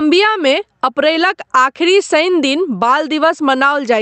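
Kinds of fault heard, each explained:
Gain pumping: the level breathes all the way through this speech, ducking by something like 10 dB the moment the talking resumes. That's most likely the input gain set far too hot, with a fast limiter or compressor clamping down on each loud syllable. Loud and quiet parts end up squashed close together, all heard through a call codec whose top end stops around 8 kHz.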